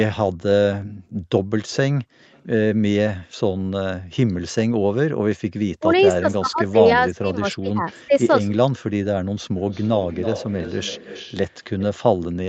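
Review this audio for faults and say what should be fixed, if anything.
Background gated by the echo canceller: at 1.12 to 1.17 s the room sound dips by up to about 12 dB for roughly 50 ms, then comes straight back. That's the echo canceller clamping the mic while the far-end loudspeaker was active, so the ambience briefly ducks and reappears. A gentler suppressor setting, or comfort noise filling the gap, would stop the room from pumping like that.

Echo leak: a delayed copy of the speech turns up four times. There are faint scraps at 2.34 to 2.41 s (about 291 ms late, around 40 dB down) and at 7.88 to 7.93 s (327 ms late, roughly 35 dB down). A longer stretch runs from 5.76 to 6.33 s at about 30 dB down. The worst is 9.71 to 11.83 s, where the echo sits only around 15 dB below the speech, 327 ms behind. The far side's canceller likely didn't fully subtract what its mic picked up from its loudspeaker. 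Better echo-path modelling on the far end, or headphones there, would keep that return out.

Speech suppressed in double talk: between 5.79 and 8.13 s, while both sides are active, the talker's level gets pushed down, in pieces totalling about a second, dropping by as much as roughly 30 dB. This is likely the echo canceller failing to tell local speech from loudspeaker echo and ducking both. An echo canceller with proper double-talk detection would let the local talker through instead of chopping them.

The audio tops out at 8 kHz, which fits the call's mic processing and a wideband Opus path doing their normal job.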